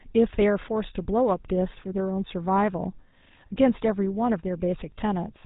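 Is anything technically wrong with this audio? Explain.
Yes. Throughout the speech there is plainly audible GSM full-rate codec damage, which fits a 13 kbps stream. The codec rebuilds the voice from a vocal-tract filter excited by sparse, regularly spaced pulses, giving a buzzy, gravelly roughness. A spectrogram shows nothing above 4 kHz and coarse, comb-like harmonics.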